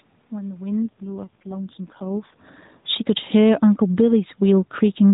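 From 2.77 s to 5.09 s the automatic gain is falling. The gain control judged the input too loud, or its background noise too strong, and pulled its gain down over the following seconds. The voice and the room noise behind it sink together, ending about 5 dB lower.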